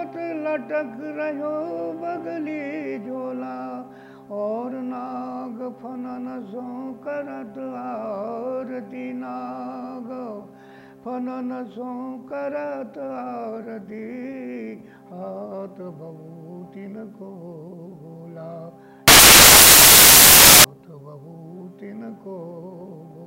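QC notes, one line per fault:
19.08–20.64 s, samples built from the wrong bytes: for about 1.6 s the sound gives way to loud, harsh broadband noise, because each sample is being assembled from misaligned or swapped bytes, so the rapidly changing low-order bits land in the most significant positions. It stops abruptly at 20.64 s.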